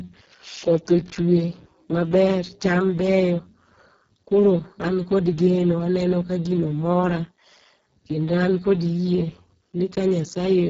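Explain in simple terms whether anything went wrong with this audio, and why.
Something did go wrong. The speech was squeezed through the Speex codec, an older voice-chat compression method, at a very low quality setting, and that lasts from start to finish. At that setting there is too little data to describe the buzz and breath of the voice, so the codec rebuilds them roughly. The speech comes out heavily damaged: noisy and hoarse, with everything above about 7.7 kHz missing and the upper range reduced to a hissy fill.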